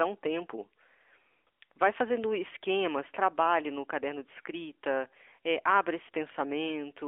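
From start to finish, the speech carries the sound of the AMR narrowband mobile codec. Sampling at 8 kHz leaves nothing above 4 kHz. The heard band sits between 300 Hz and 3.4 kHz. Each 20 ms frame is rebuilt from a vocal-tract model fed with a few pulses. The damage is plainly audible: a buzzy, synthetic edge on the voice. That degree of coding fits a mid-rate mode near 10.2 kbps.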